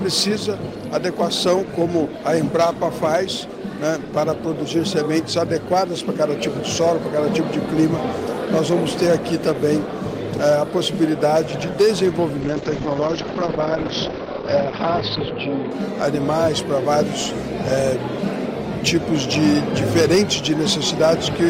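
Throughout, a stage is driven about 7 dB beyond its limit, so around one percent of samples are flattened; this hard clipping adds crackle and harsh edges on peaks. From 12.41 to 15.77 s a call bitrate drop cuts the encoder's budget, consistent with a fall from about 32 to 11 kbps. For about 2.9 s the bandwidth shrinks from 20 kHz to 6 kHz, leaving the sound muffled and watery.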